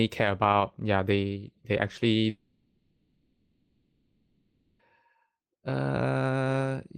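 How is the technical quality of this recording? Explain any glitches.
The recording has one serious interruption. A long network dropout runs from 2.29 to 4.81 s, just after "yeah they they actually". About 2.5 s of audio is lost. The last sound is stretched into a buzzy hiss that fades and settles into a low steady noise, with no true silence. Speech then resumes with that stretch simply gone. This is likely a receiver concealing a run of packets that never arrived.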